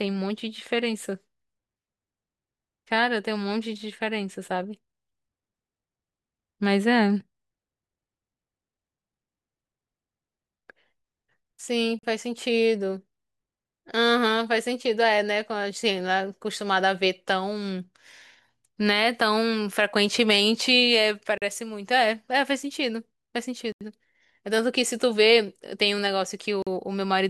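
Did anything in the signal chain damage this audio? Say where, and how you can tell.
Yes. Blocks of digital silence in the driver or buffer stage at 11.99, 21.38, 23.72 and 26.62 s, each a hard cut to silence with no fade. Three last 43 ms and one 85 ms, which fits a 2048-sample buffer left unfilled once, then twice running.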